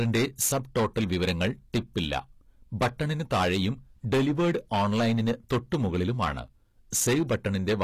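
It's a speech clip with hard clipping all the way through: it's overdriven by about 16 dB, so around 7 percent of samples get flattened, giving fuzzy distortion on louder syllables. The top end is plainly mangled too, with gritty, metallic sibilance and nothing above 15 kHz, likely from HE-AAC compression at a low bitrate around 24 kbps.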